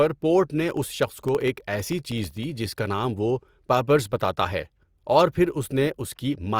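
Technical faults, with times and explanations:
0.71–2.56 s, periodic USB or driver dropouts: after "پورٹ نے" and up to "جس کا نام وہ", the speech is cut every 64 ms by a gap of about half a millisecond filled with silence, around thirty in all, heard as a regular ticking under the speech.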